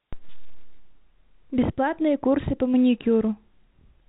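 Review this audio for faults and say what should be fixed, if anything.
Nothing in this speech needs fixing, as no faults turn up anywhere in the recording. It has the narrow telephone character of G.711 A-law coding, with nothing above 3.8 kHz, which fits the 64 kbps fixed-line format.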